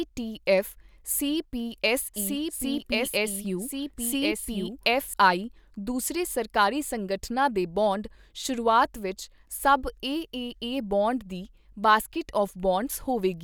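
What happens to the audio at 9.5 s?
At 9.5 s the speech carries on intact, with no dropout, click, distortion or other fault audible at that point.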